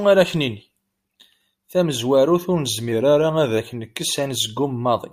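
From 2.92 s to 3.58 s the speech drops about 6% in speed and 107 cents in pitch, just over a semitone flat, for roughly two thirds of a second, then snaps back to normal. This is likely a drift correction step, where clock-matching software abruptly slowed playback to refill its buffer. On a spectrogram the harmonic stack steps down by about 6% across that span and jumps back up at its end, and the waveform there appears slightly stretched.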